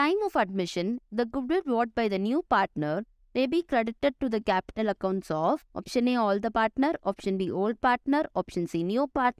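No technical faults can be heard anywhere in this recording.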